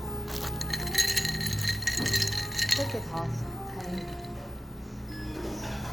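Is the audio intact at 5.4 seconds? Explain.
Yes, the audio is intact at 5.4 s, with no fault present at that moment.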